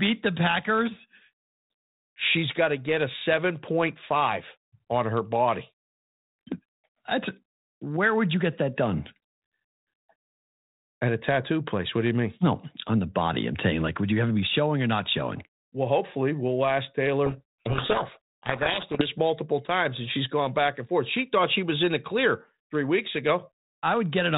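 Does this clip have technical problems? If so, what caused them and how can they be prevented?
Yes. From 17.26 to 19.10 s, between "hopefully we'll ask" and "multiple times and she's", the speech is buried in harsh distortion. This is a codec payload misread: the two ends disagree on the bit order of the G.726 code words, so the decoder unpacks frames that look valid but have their fields in the wrong places, until both sides agree again. To prevent it, fix the G.726 packing order explicitly in call setup and test it between both endpoints.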